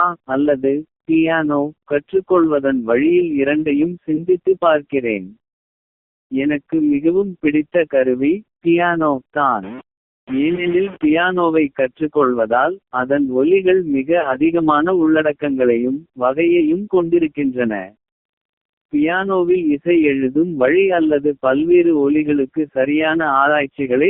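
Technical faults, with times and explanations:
Throughout: AMR narrowband mobile codec. The speech has passed through AMR-NB at 5.9 kbps, a low rate for this codec, and the damage is heavy. Sampling at 8 kHz leaves nothing above 4 kHz, and the audible band sits between roughly 200 Hz and 3.5 kHz. With so few bits for the excitation pulses driving the vocal-tract model, the voice comes out buzzy and synthetic, and sibilants lose their edge.
4.16 s, 10.56 s and 14.20 to 14.35 s: lost AMR speech frames. These are single lost 20 ms frames at 4.16 s and 10.56 s, and a run of two frames, 40 ms, starting at 14.20 s. Each failed frame is filled by repeating the last good pitch and spectral settings at reduced gain. The single losses come through as a short dip or warble. The double loss is held slightly longer and fades before the voice returns, briefly thin and rough.
9.63 to 11.05 s: stuck bit. 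Distortion rides on the signal across this span, and low-level passages fill with a noise that should not be there. This is likely a data bit held at a fixed value in the converter or its data line. Roughly half of all samples come out offset by that bit's weight, in a pattern that follows the waveform, and quiet samples crossing zero flip the error.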